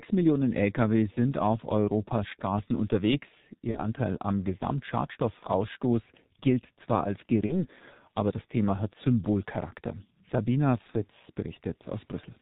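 Throughout, the speech has passed through the G.723.1 codec. Its slow 30 ms frames and heavy damage fit a stream of about 6 kbit/s. Nothing above 4 kHz survives, so the voice sounds muffled and hoarse, and consonants smear together.

VoIP packet loss concealed by the speech codec occurs at 3.71–3.80 s, 5.39–5.48 s, 7.47–7.65 s (after "gilt zwar als", before "aber das") and 10.91–10.98 s. Each gap fits one lost 30 ms frame. The decoder extends its last pitch and filter, giving a brief fading buzzy tone or coloured noise before the voice recovers.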